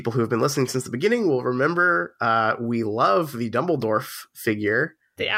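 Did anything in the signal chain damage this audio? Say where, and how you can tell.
Yes. At 3.82 s, just after "uh we love the", a block of digital silence about 0.67 ms long (roughly a 32-sample block) cuts the speech to silence and back with no fade. That unfaded edge makes a tick rather than a softened dropout. It points to the driver or buffer stage not filling output in time.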